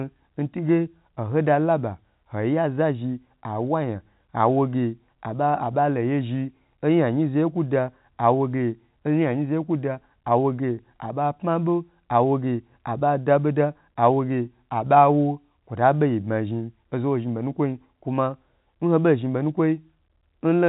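Nothing stood out on listening to this speech as a technical problem.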